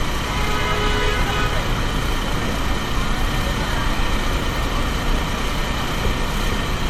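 A recording of everyday sounds with generation loss throughout: textures swirl and turn hollow, and sharp attacks come out smeared rather than crisp. A spectrogram would show nothing above 16.5 kHz, with flickering holes and patchy, blocky noise filling the band below, while the waveform's transients look rounded off. The likely cause is repeated lossy MP3 coding, about three passes at a rate that points to 64 kbit/s, each re-quantising on a shifted frame grid so the damage stacks.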